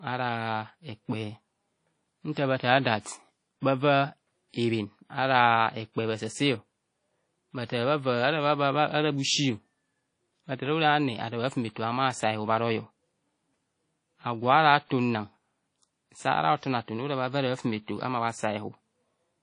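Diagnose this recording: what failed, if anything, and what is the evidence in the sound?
The speech has a washy, ringing quality through the whole clip, with a hiss that swells and fades along with the voice, and nothing at all above about 10.1 kHz. This points to the codec stage, likely WMA compression at a low rate, one that fits around 32 kbps. The long transform blocks smear quantisation noise over tens of milliseconds, and the encoder has discarded the weak and high-frequency content.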